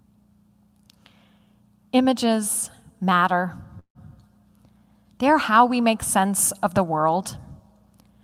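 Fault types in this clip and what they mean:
Call audio freeze: at 3.79 s the speech stalls into a fading buzz, then silence, likely late packets draining the jitter buffer, and resumes with nothing lost.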